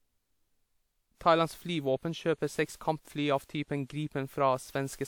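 Generation loss runs throughout the speech, from start to end. The sound is swirly and hollow, with smeared consonant attacks and a grainy, watery texture, though the band still extends to about 20.1 kHz. The likely cause is repeated lossy coding: the character points to a WMA chain at around 96 kbit/s, applied roughly four times. Each re-encode quantised the signal again on shifted frames, so noise accumulated beyond what one pass would leave.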